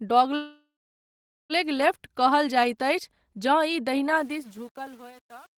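Speech with a call audio freeze from 0.35 to 1.53 s: the last sound lingers as a fading buzz, then about 0.8 s of silence, and speech resumes with nothing lost, unlike a dropout, so a likely jitter-buffer underrun. The fade-out beginning around 4 s shows truncation distortion from 4.16 s to the end, grittiest from 4.33 s, which fits an 8-bit undithered stage rather than a clean fade.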